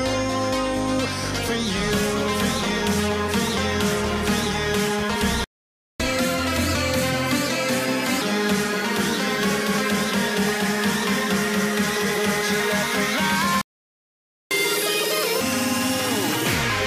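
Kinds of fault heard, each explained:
Playback stall: the player likely ran dry of data or was blocked, so output falls silent mid-flow, for about 0.55 s and then 0.9 s.
Catch-up at higher speed: the player resamples its backlog faster, raising speed and pitch, 1.25x (around four semitones) after the first gap, 2x (nearly an octave) after the second.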